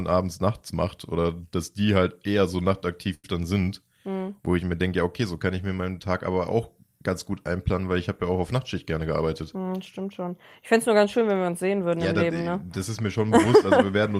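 A short stall from a late packet comes at 3.14 to 3.25 s. A packet of speech failed to arrive on time, so the jitter buffer emptied and the receiver had nothing new to play. It stretched the last bit of sound for about 93 ms until the packet turned up, then resumed exactly where it left off. Nothing is lost, but the sound hangs on unnaturally with a faint buzz or dip, and playback now runs 93 ms later.

A jitter buffer speed-up follows at 8.92 to 9.73 s. The buffer was holding more audio than it wants, as happens after delayed packets arrive in a bunch. To bring the delay back down, the receiver repeatedly cut out tiny slices, each one or a few pitch periods long. That trimmed about a tenth of a second in total. The speech plays at 110% speed without any change in pitch and sounds hurried over that stretch.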